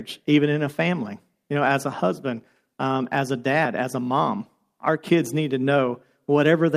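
Nothing in this recording gives any sign of a technical fault, so there's nothing here to flag.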